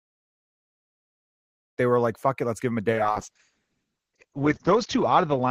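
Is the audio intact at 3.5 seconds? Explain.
No. A call bitrate drop runs from 2.93 s to the end: the encoder falls from 40 to 6 kbps, coding coarsely and cutting bandwidth to 8 kHz, so the speech sounds rough and muffled.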